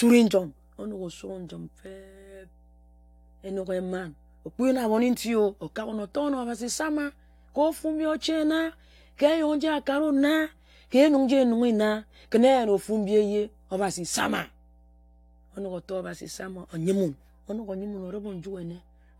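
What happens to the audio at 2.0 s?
At 2.0 s the speech sits over mains hum, a steady 60 Hz tone with low harmonics that runs through the whole clip rather than starting there. A ground loop or nearby transformer couples the power line into the signal, leaving the hum roughly 30 dB below the speech.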